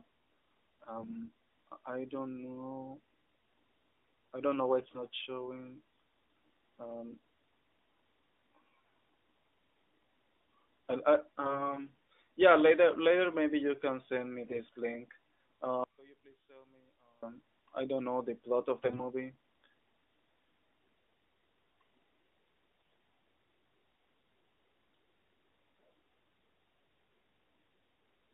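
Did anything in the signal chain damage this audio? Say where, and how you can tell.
Yes. Short bursts of hoarse, scratchy, gargling speech occur at 0.96–1.16, 4.80–5.01, 11.42–11.79, 14.46–14.60 s (after "you can send me"), 18.84–19.02 s (after "know the plot of") and 22.72–22.94 s. Pitch and level hold throughout. These are AMR bit errors on the network link: a few percent of the weakly protected bits flipped, misplacing the excitation pulses and skewing the fine gain and spectral values.

From 15.84 to 17.23 s, just before "I don't know the", the speech drops by about 30 dB to a faint residue, then recovers. This is the signature of one channel inverted, likely a polarity-reversed leg in the wiring or mixdown, so that the centred speech cancels when the two channels are summed to mono.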